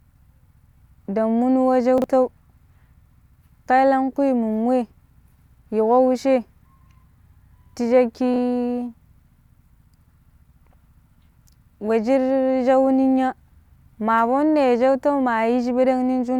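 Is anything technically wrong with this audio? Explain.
Yes. The speech has two moments where chunks play out of order. The first runs from 1.98 to 2.04 s. One 20 ms chunk plays two chunks late, after the chunks that should follow it. The second runs from 8.34 to 8.38 s, where a 20 ms chunk plays one chunk late. No audio is lost, but each swap creates three hard joins. Each moment is heard as a brief jumbled stutter.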